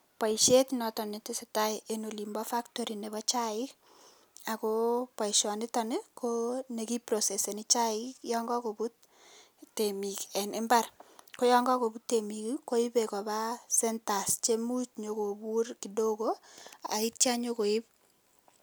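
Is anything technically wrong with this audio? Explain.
No, nothing technically wrong can be heard in this speech recording. No fault of any kind turns up at any point in the clip.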